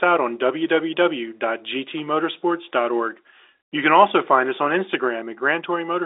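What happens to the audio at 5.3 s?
Nothing goes wrong at 5.3 s: the speech carries on intact, with only the narrow, telephone-band sound of G.711 coding, which holds nothing above about 3.8 kHz.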